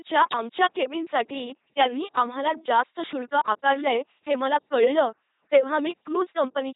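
LPC-10 vocoder damage runs through the whole speech clip, from start to finish. The vocoder discards the original waveform and resynthesises each moment from a small all-pole vocal tract filter, excited by either a pulse train or noise and never a mix of the two. The result is a heavily damaged, buzzing, mechanical robot voice, with nothing above 3.8 kHz, which fits the 2.4 kbit/s rate of this codec.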